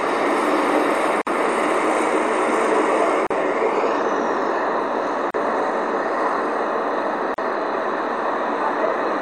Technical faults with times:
1.22-1.27 gap at a join of encoded pieces
3.27-3.30 gap at a join of encoded pieces
5.30-5.34 gap at a join of encoded pieces
7.34-7.38 gap at a join of encoded pieces

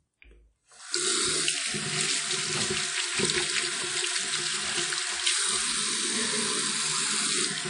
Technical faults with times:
0.00-7.70 WMA compression

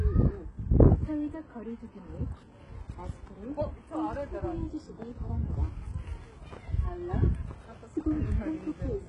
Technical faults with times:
0.00-9.09 HE-AAC compression

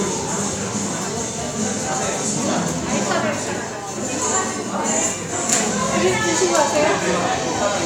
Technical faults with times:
none

